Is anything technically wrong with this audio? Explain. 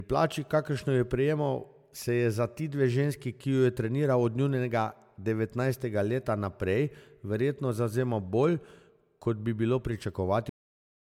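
Yes, two things. First, there's generation loss running through the whole clip. The speech sounds swirly and hollow, with a smeared, watery quality and soft, blurred consonant attacks, all more than a single decent MP3 encode would produce. The likely cause is the audio being decoded and re-encoded as MP3 around seven times, at a rate that fits 128 kbit/s. Each pass quantises on a shifted frame grid, so the noise and spectral holes keep piling up.

Second, it has a cut-off end at 10.49 s. The speech stops partway through a sound and drops straight to digital silence for the remaining half-second or so, with no natural decay at all. That's what happens when the final buffers never get written out or played, so whatever was in progress is simply chopped off rather than ending on its own.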